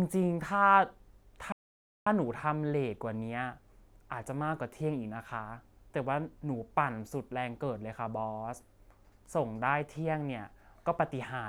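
At 1.52 s a playback stall cuts into the speech: the player likely ran short of data or had its thread blocked, so output halted. The sound drops to silence for about 0.54 s, then picks up again at 2.07 s.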